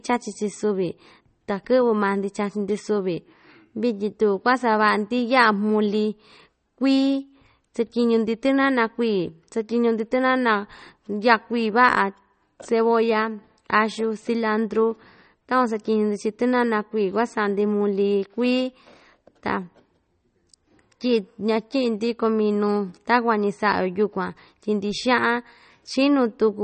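Heavy MP3 compression is the likely cause of damage that runs through the whole recording. Short of bits, the encoder discarded all content above 8.4 kHz and dropped quieter frequency lines that flicker in and out between frames. The speech sounds dull and muffled, with a watery, swirling texture and metallic chirps on s sounds. The damage is plainly audible and fits a low bitrate of about 32 kbps.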